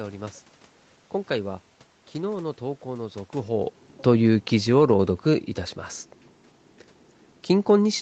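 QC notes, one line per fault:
3.42–5.56 s, automatic gain falling: judging the input too loud or its background noise too strong, the gain control eased down about 4 dB, so speech and room noise sink together.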